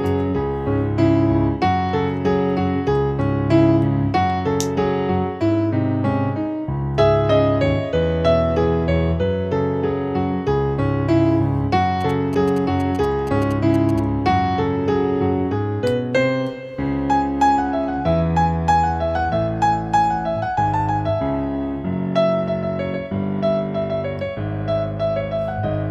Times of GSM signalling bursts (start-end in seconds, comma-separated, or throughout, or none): 12.01-14.00